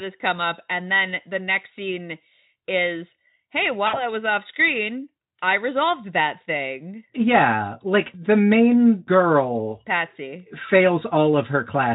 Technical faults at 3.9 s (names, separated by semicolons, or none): VoIP packet loss concealed by the speech codec